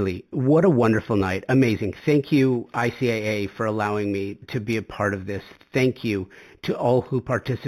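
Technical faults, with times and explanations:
Throughout, imaging from linear upsampling: the top of the band is dulled, which points to audio that began at an 8 kHz rate and was raised to 44.1 kHz by joining samples with straight lines. That weak filtering leaves a faint mirror copy of the speech spectrum between 4 kHz and 8 kHz, roughly 30 dB down, heard as a light metallic shimmer on sibilants. A plain low-pass would only sound muffled, and aliasing would fold tones downward instead of mirroring them upward.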